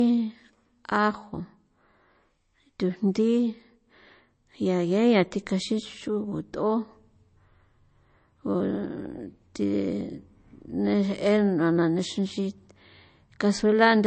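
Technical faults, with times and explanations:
Throughout, low-bitrate audio saved at a high bitrate: the speech sounds dull, with nothing above 8.3 kHz and the artefacts of the earlier encoding still present. This likely comes from a very low-bitrate MP3 encoding, around 33 kbit/s, later re-saved as a 320 kbit/s MP3, which cannot restore what was discarded.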